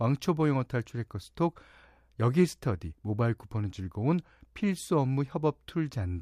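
No technical faults can be heard anywhere in this speech recording. Nothing in it breaks up, drops out or distorts.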